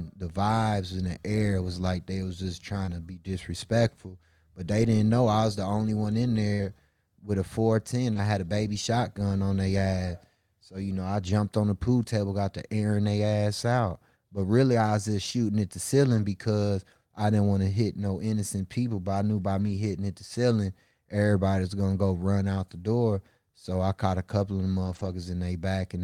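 Short concealed packet loss at 2.85 to 2.89 s and again at 8.13 to 8.17 s in this speech recording takes out about 20 ms each time. The receiver covers each hole by carrying the preceding sound forward, continuing its pitch or its noisy texture, before blending back into the real signal, so each spot comes across as a brief smear or wobble rather than a silence. A burst of packet loss follows at 6.53 to 6.61 s, right after "the only one in": roughly 60 ms never arrives in time to play. The decoder stretches the last sound and fades it over that span, giving a short held buzz or dying hiss, then jumps ahead with the intervening audio gone. Lost packets rebuilt from error correction appear at 8.15 to 8.17 s (between "with a four ten" and "had a baby shotgun"), 11.27 to 11.29 s, 16.09 to 16.19 s, 19.57 to 19.71 s (between "I knew by" and "hitting at the ceiling") and 24.83 to 25.13 s, covering from 20 ms up to about 160 ms. 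No gap is heard in any of them because a low-bitrate copy carried in the following packet was played in place of what was lost, but those stretches sound coarser and noisier than the surrounding audio. The longest ones fit several separate 20 ms packets.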